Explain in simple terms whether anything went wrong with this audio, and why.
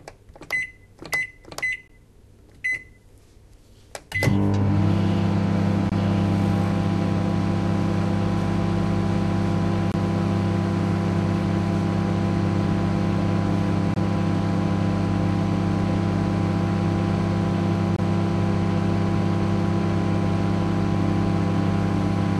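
The audio was encoded as separate pieces about every 4 seconds and joined without trimming each piece's built-in padding. The result is a gap at a join of encoded pieces: short silences of about 18 to 23 milliseconds at 1.88, 5.89, 9.92, 13.94 and 17.96 s. After each one, the sound carries on from where it stopped.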